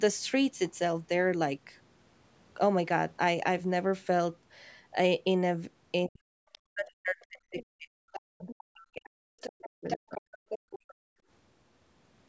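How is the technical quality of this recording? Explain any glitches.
The recording is a call with clear echo-control problems, all between about 6 and 11 s. The spectrogram is empty above 8 kHz, which is the call's normal band limit.

From 6.06 to 10.33 s, the speech is suppressed in double talk. This is likely because the echo canceller took the overlap for echo. About three seconds dip by up to roughly 40 dB, showing as notches in the waveform and blank gaps in the spectrogram.

The other side's voice leaks through at 6.52 to 6.58 s, 8.14 to 8.64 s and 9.41 to 10.94 s. This is likely leftover loudspeaker echo. It grows from far below the talker to only about 10 dB under, appearing as separate harmonic traces.

The background is gated by the echo canceller from 10.61 to 11.28 s. The microphone is clamped hard, so the room sound drops by about 31 dB for roughly half a second. This shows as a near-flat stretch of waveform.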